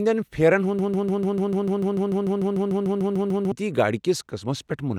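From 0.79 s to 3.52 s the speech sticks on a single 0.15 s fragment that repeats exactly, back to back, 18 times, a stuttering broken-record loop. The player, encoder or stream likely stalled and kept resending its last fragment, so the intervening speech is lost.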